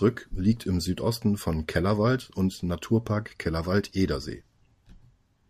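No technical faults are audible anywhere in the speech recording.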